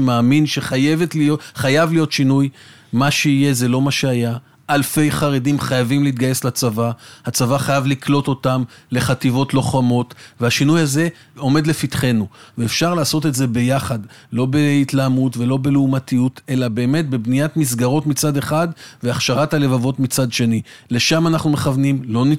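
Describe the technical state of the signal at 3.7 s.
At 3.7 s the signal is intact, with no dropout, click, distortion or other fault audible at that point.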